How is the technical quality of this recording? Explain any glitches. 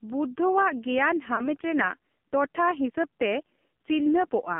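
Technical quality is poor, with heavy codec damage throughout and one glitch.

The AMR narrowband mobile codec colours the whole speech clip. The band runs only from 150 Hz to 3.5 kHz, and the buzzy, synthetic tone fits a very low rate near 5.9 kbps. A pulse-driven vocal-tract model replaces the real waveform. On a spectrogram, everything above 3.5 kHz is empty.

Lost AMR speech frames cause a glitch from 1.36 to 1.48 s. It sounds like a single missing frame. The decoder repeated the last good settings at falling gain, giving a brief smeared dip. The waveform shows a short amplitude sag, and the spectrogram shows blurred, repeated harmonics.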